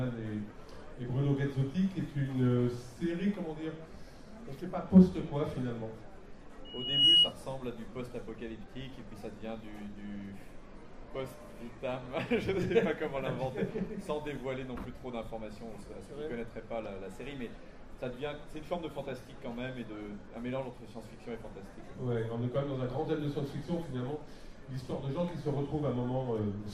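Loudspeaker feedback squeal appears from 6.65 to 7.33 s: a microphone re-captured its own loudspeaker, and the loop gain passed unity at 2.9 kHz. That single tone swells over a few tenths of a second into a piercing squeal, ending roughly 15 dB above the surrounding sound.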